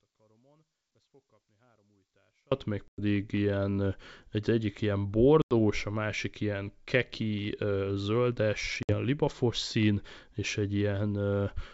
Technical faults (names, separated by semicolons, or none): audio dropout to a faint residue; packet loss on an ADPCM call